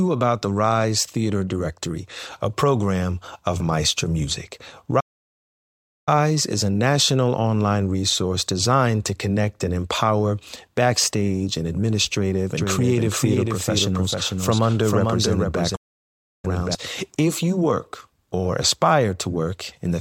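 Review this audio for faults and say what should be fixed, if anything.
Two playback stalls cut the speech. The first runs from 5.00 to 6.09 s, about 1.07 s of silence, before it picks up at "is a national online". The second falls from 15.75 to 16.45 s, about 0.68 s. The player likely ran dry or its thread was blocked. Larger playback buffers and a non-blocking audio thread would prevent this.

A doubled audio track starts at 12.57 s, just after "empower backstage and administrative", and ends at 16.75 s. A second full-band copy trails by around 0.4 s, roughly 5 dB quieter. It has no reverb tail. It starts and stops abruptly. A second, slower capture path is the likely cause. Routing the source through a single capture path would prevent it.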